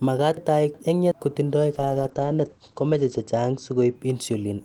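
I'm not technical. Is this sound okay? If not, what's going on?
No. From 0.37 to 1.12 s there are chunks out of order: a slice of the speech about a third of a second long plays one slot late, after the piece that should follow it. Nothing goes missing, but that moment sounds jumbled.

From 1.74 to 4.01 s there is a call bitrate drop. The connection cut back how much detail it sends, so the speech turns rough and watery. Sounds above about 8 kHz are cut, making it muffled, worst for about 1.5 s.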